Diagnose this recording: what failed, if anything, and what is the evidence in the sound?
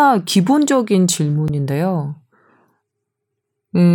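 A sharp tick at 1.48 s is a block of digital silence, a 10.7 ms hard-edged gap that fits a 512-sample buffer the driver didn't fill in time.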